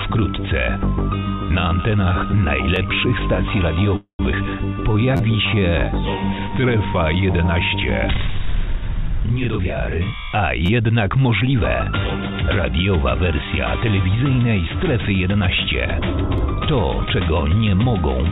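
At 2.76 s the playback device ran short of new audio and replayed its last buffer once, a repeated buffer. Each block lasts about 11.6 ms, which fits a 512-sample buffer, so the repeat is heard as a tiny click rather than a stutter.

From 3.96 to 4.20 s the jitter buffer ran empty, most likely because packets were held up in transit, causing a call audio freeze. The receiver stretched the last sound into a buzz that fades, with about 100 ms of silence inside the 229 ms fill. The audio then resumes where it stopped, so nothing is lost and the stream falls 229 ms further behind.

At 4.32 s a stretch of audio was dropped while later audio was already waiting, a skip ahead. About 150 ms goes missing and the two sides are joined almost directly, so the sound jumps forward with barely a gap.

From 4.74 to 6.79 s the jitter buffer was low and rebuilt its reserve by repeating single pitch periods, a jitter buffer slow-down. 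About 119 ms is added and playback runs at 94% speed at the same pitch, sounding slightly drawn out. Within it, at 5.17 to 5.20 s, another repeated buffer plays one block three extra times, giving a brief buzzing stutter.

From 9.36 to 12.77 s the jitter buffer held more than its target and cut short pitch-period pieces, a jitter buffer speed-up. Roughly 200 ms is removed and the audio runs at 107% speed at the same pitch, sounding a little hurried. At 10.66 to 10.69 s a repeated buffer again plays three extra times, giving a short buzz. At 16.38 s a single extra play gives one more click. Through the whole clip the G.711 call path leaves nothing above 4 kHz.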